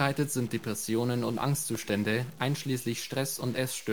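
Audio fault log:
Throughout: stuck bit. A distortion rides on the speech, and the pauses fill with a steady noise floor instead of going quiet. The likely cause is one data bit stuck at 0 or 1. Unlike clipping, the grit persists even when the level is low.
1.30–1.89 s: processor overload crackle. Around seven short dropouts, each a few milliseconds of silence with hard edges, cluster into a burst of gritty tearing as buffers miss their deadlines. It stops once the load passes, unlike constant stuck-bit distortion or a single isolated click.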